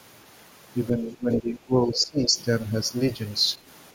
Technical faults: speech suppressed in double talk; other side's voice leaking through

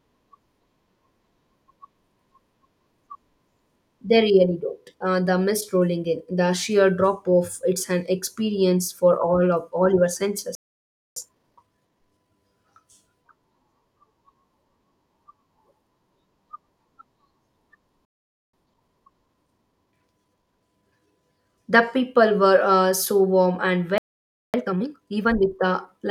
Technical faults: playback stall; time-compressed catch-up

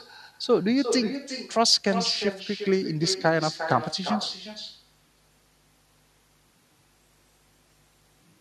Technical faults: echo with no canceller

